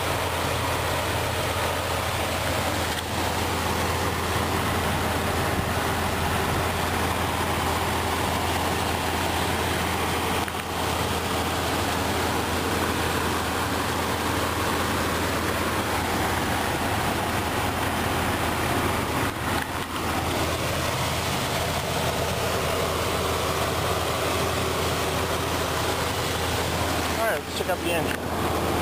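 At 2.9 s the audio skips, with roughly 30 ms missing and the two sides butted together. This is likely audio missing between chunks, consistent with 4-second processing blocks.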